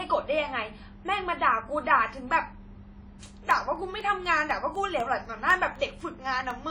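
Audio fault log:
throughout, WMA compression: plainly audible ringing and washy smearing, with a hiss that swells and fades with the speech. This likely comes from a transform codec at a low bitrate, around 32 kbps, zeroing weak detail. A spectrogram shows a hard ceiling at 10 kHz and blotchy, patchy upper bands.
3.26 to 6.51 s, periodic USB or driver dropouts: about fifteen tiny gaps, one every 0.25 s, each roughly half a millisecond of silence where the bus or driver stalled. They are heard as steady ticks under the speech. The waveform shows brief flat notches, and the spectrogram shows evenly spaced thin vertical lines.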